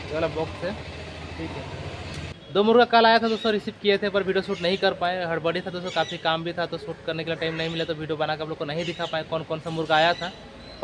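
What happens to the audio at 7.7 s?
Nothing goes wrong at 7.7 s: the audio carries on intact through that moment, with no dropout, click or distortion to be heard.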